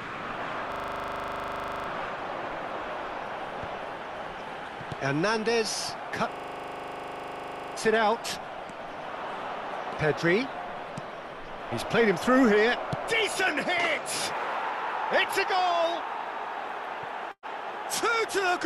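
The audio has two stretches of system hang loop, at 0.72 to 1.88 s and 6.32 to 7.76 s. The same 40 ms chunk repeats as a 25 Hz rattle while the ring buffer cycles, and playback then picks up without skipping anything. There's also a burst of packet loss at 17.31 to 17.46 s: about 120 ms goes missing, and concealment holds the last sound and fades it, leaving a short silent stretch before the audio jumps ahead.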